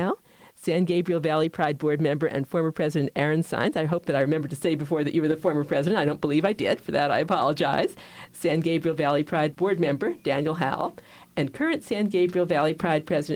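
Nothing goes wrong anywhere in this one, so there's simply no fault to point to at any moment in the audio.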